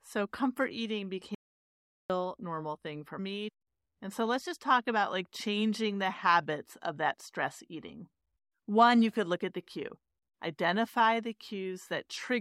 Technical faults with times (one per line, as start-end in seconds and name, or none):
1.35-2.10 audio dropout to silence